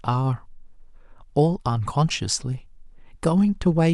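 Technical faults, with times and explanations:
Nothing technical trips up this bit of speech, with no dropouts, glitches or other faults to point to anywhere in it.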